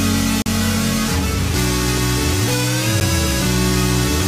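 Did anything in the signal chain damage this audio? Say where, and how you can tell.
Yes. A 40 ms hole from 0.42 to 0.46 s and a brief tick at 3.00 s are blocks of digital silence. The driver or buffer stage likely output zeros, cutting abruptly with no fade.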